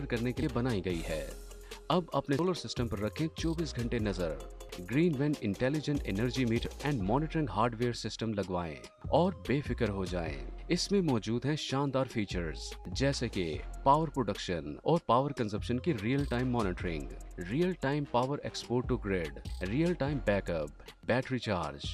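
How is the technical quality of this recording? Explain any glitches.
Four glitches in the first seven seconds are most likely a dropped buffer (overrun), where the capture software fell behind and the hardware overwrote audio it had not yet collected. At 0.43, 2.39, 4.69 and 6.66 s, a short chunk is missing, roughly a tenth of a second at 0.43 and 4.69 s and closer to 150 ms at 2.39 and 6.66 s. The sound on either side is joined directly with no gap, so each one is heard as a sudden jump forward.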